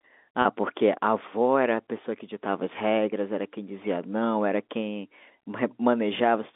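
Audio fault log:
0.42–0.45 s, packet loss with pitch repetition: a brief held, buzzy tone where a 30 ms gap, fitting one lost packet, was filled by repeating the last pitch period.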